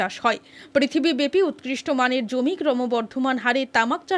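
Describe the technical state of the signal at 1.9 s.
At 1.9 s the signal is intact, with no dropout, clipping, distortion or other fault audible at that moment.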